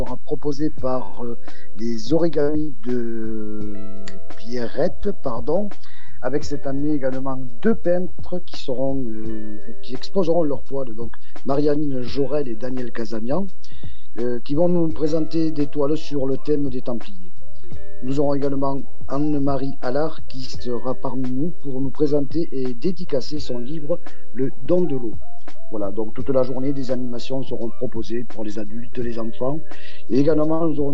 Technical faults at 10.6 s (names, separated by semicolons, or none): DC offset